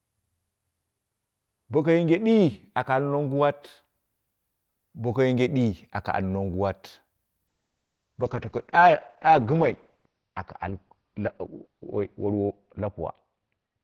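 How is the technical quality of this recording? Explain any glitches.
The recording is clean until one glitch in the second half: a call bitrate drop starting at 7.48 s and lasting to the close. From there the audio turns rough and muffled, with the top end cut off at about 6 kHz. The sound points to the encoder's budget falling from around 32 to 8 kbps, with the lowest rate held for 4.74 s. Unlike a dropout or packet loss, nothing goes missing. The speech simply continues, more coarsely coded and narrower.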